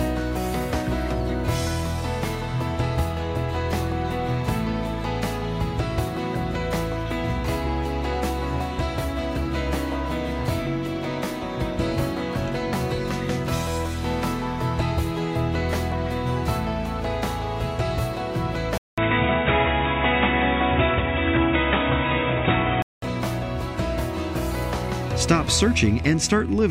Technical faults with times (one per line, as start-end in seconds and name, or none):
18.78-23.02 input switched to a poorer device